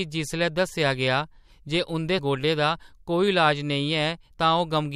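Whole compressed frames were lost or rejected by the decoder in this speech clip, so at 2.18 s, just after "गेआ जे उंʼदे", playback skips ahead by roughly 0.7 s of audio. The jump fits about 30 frames of 21.3 ms each. The speech lurches forward abruptly with a stretch simply missing.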